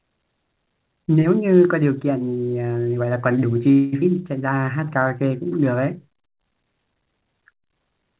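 From 3.72 to 3.94 s the speech stalls: the last sound hangs on as a fading buzz for about 0.2 s, then the talk resumes exactly where it left off with nothing lost. This is a call audio freeze, likely caused by packets held up in transit so the jitter buffer ran dry and the receiver stretched the final fragment until delivery resumed, inserting about 203 ms of delay into the stream.

Moments later, between 4.00 and 4.04 s, playback lurches forward with only the briefest join. It is a skip ahead: roughly a tenth of a second of speech is gone, and the audio on either side is butted together almost directly. The receiver discarded that stretch while later audio was already queued, clawing back much of the delay the freeze had just added.

From 4.54 to 5.30 s the speech drags at unchanged pitch, with sounds drawn out, running at 88 percent of normal speed. This is a jitter buffer slow-down. 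With its reserve running low, the buffer repeated single pitch periods and small slices of pauses over and over, adding 95 ms in total to rebuild its cushion. Throughout, the call path leaves nothing above 4 kHz, which fits a narrowband G.711 A-law codec at 64 kbps.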